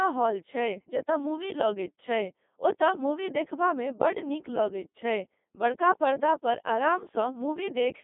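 Codec 2 vocoder damage runs through the whole speech clip, from start to finish. Rather than keeping the waveform, this low-rate digital-radio codec sends only pitch, voicing, energy and a coarse spectral envelope, and the decoder rebuilds the voice from sine waves. The heavy, robotic buzz fits a 2.4 kbit/s mode. The sound sits in a narrow line band of about 200 Hz to 3.6 kHz, with nothing above 3.8 kHz.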